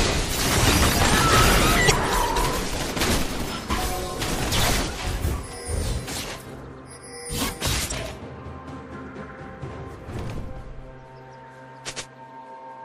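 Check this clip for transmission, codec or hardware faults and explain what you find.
Two faults are present: compression damage across the whole clip and three brief bursts of corrupted stream data.

MP3 compression, throughout: a lossy encoder has left the audio plainly watery and swirly, with metallic chirps on bright sounds and smeared attacks. This is likely MP3 coding at a low rate, consistent with roughly 64 kbps. The encoder spends its limited bits where its hearing model says they matter most, so high frequencies are discarded and quieter spectral detail flickers in and out from frame to frame.

Damaged data in a compressed stream, at 1.87–1.91 s, 4.51 s and 7.88–7.92 s: each is a short chirp, squawk, click or hole. At these points the compressed bytes are corrupt. The decoder misreads or drops the affected frames, loses its place in the stream and resynchronises at the next valid frame header.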